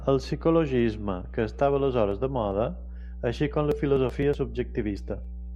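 A steady 60 Hz mains hum runs under the speech throughout, loud relative to it, from a ground loop or transformer; its fixed pitch separates it from broadband rumble.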